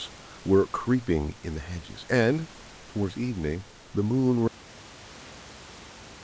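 An audio dropout to silence ends the speech: at 4.48 s the input was likely lost, through a disconnected device or a failed link, and the recorder kept writing silence. The sound cuts off mid-flow and stays completely silent to the end, with even the quiet room noise gone.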